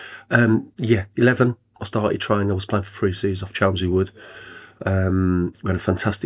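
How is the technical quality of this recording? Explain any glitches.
Nothing in the recording stood out as a problem on listening.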